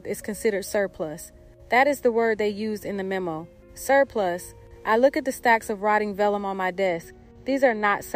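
From 6.87 s to 8.16 s, channel delay (comb filtering) appears. One channel lags by a tiny fraction of a millisecond, which fits a couple of samples. Summed to mono, the channels cancel around 10 kHz. The top end sounds dull.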